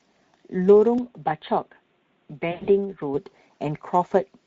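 Throughout, the speech carries the hoarse, noisy grain of the Speex codec. The excitation is coarsely coded, so voiced sounds lose purity, and the damage is plainly audible. Its steady presence, rather than any abrupt change, separates it from the later faults, and the texture points to a middle-rate setting around 16.8 kbps.

From 0.98 s to 3.14 s the sound abruptly turns duller and somewhat quieter, with nothing above 3.8 kHz and a faint new noise floor. It clears again at 3.14 s, with no silence at either switch. That matches an input switched to a poorer device, likely a narrower-band microphone or headset profile. Unlike codec damage, the change is sudden, bounded, and brings its own noise.

From 2.51 s to 2.68 s, within that duller stretch, VoIP packet loss concealed by the speech codec stretches the sound into a fading buzz or coloured noise. About 140 ms is missing across 160 ms, with the longest gap 100 ms. 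The decoder extrapolates from its last pitch and filter, so distortion lingers briefly after packets return rather than stopping cleanly like a dropout.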